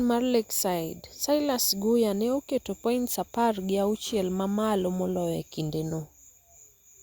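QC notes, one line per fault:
No faults found in this speech clip. Nothing in it calls for a timed entry.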